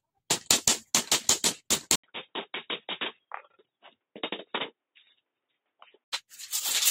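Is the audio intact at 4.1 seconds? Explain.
No. At 4.1 seconds you're inside a stretch from about 1.96 to 6.12 s where the sound goes dull and boxy, with nothing above 3.8 kHz, drops roughly 10 dB, and picks up a faint new noise floor well below the signal. It starts with an 80 ms gap. That's likely an input switched to a poorer device mid-recording, a narrower-band microphone or headset path with its own tone, level and noise.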